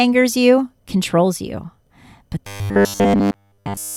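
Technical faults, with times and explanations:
2.47–3.96 s, robotic sound from repeated short buffers: right after "you but", the speech turns into a rigid, metallic buzz pitched at 100 Hz until the clip ends. This is likely because audio arrived too seldom and each gap was filled by looping the last 10 ms.
Correction: the landmark is "you controls you but".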